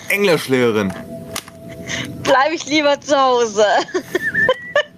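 Gain pumping runs through the whole clip: the level is squashed so loud and soft parts sit closer together, a gain swing of around 20 dB. The likely cause is input gain set far too high with a fast limiter reining it in. On a waveform the envelope looks flattened.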